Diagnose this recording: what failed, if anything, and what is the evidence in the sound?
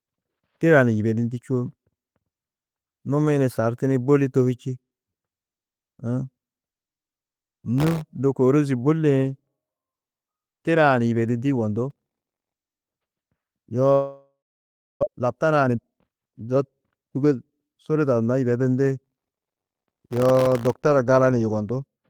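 Processor overload crackle at the driver or buffer stage: 7.78–8.01 s, 11.90–12.52 s and 19.05–20.81 s. Missed deadlines left many tiny silent gaps, which fits buffers under a millisecond.

Long network dropout at 13.93–15.05 s. A fading fill gives way to about 0.64 s of silence, and 0.6 s of audio is lost. Delayed packets are the likely cause.

Jitter buffer speed-up at 15.08–17.52 s. The sound runs at 119% speed with unchanged pitch. Short pitch-period pieces were cut, removing about half a second of backlog.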